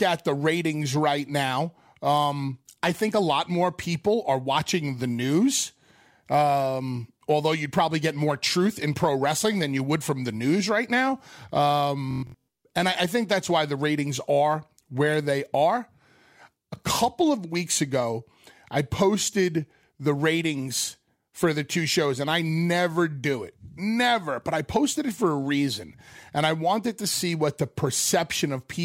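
From 12.11 to 12.40 s, before "and I I think", Bluetooth stutter: lost packets make the receiver replay its last slice as a machine-gun buzz, dropping 0.3 s of sound.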